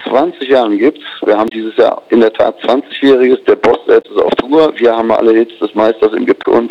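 Three brief bursts of damaged data in a compressed stream occur at 1.45 to 1.52 s, 3.99 to 4.06 s and 6.42 to 6.46 s, each lasting roughly 40 to 70 ms. At each point the decoder hit corrupted bytes, misread the affected frames and lost sync until it found a valid frame header again. The result is a short chirp, squawk, click or hole.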